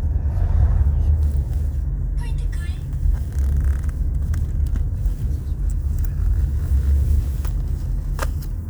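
The recording captures everyday sounds, and nothing technically wrong can be heard in it. No fault appears anywhere along its length, so there is no time or cause to point to.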